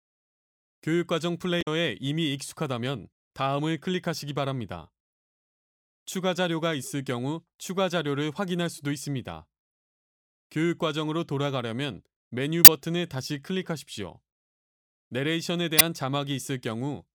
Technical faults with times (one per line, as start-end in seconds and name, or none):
1.58-1.67 damaged data in a compressed stream
12.64-12.68 damaged data in a compressed stream
15.77-15.81 damaged data in a compressed stream